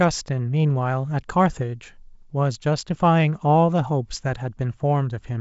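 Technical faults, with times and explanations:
No technical faults can be heard in the speech, so there are no times or explanations to give.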